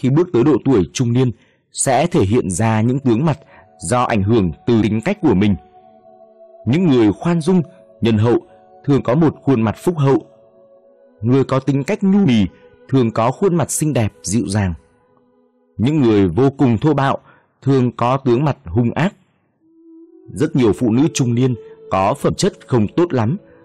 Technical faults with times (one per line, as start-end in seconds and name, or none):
4.82 compressed frames skipped
8.97 compressed frames skipped
12.25 compressed frames skipped
22.28 compressed frames skipped